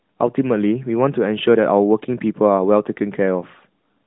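No technical faults are audible.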